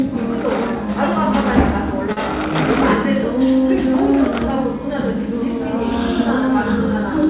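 At 2.12 s, running to about 2.19 s, there is a short stall from a late packet. A packet failed to arrive on time, and the jitter buffer ran dry. The receiver held the last sound for 48 ms until the packet came in. Then playback resumed where it had stopped, so nothing is lost. Everything after is 48 ms later. The held sound stretches slightly, with a slight buzz or dip. The band stops at 4 kHz, which fits a G.711 call codec.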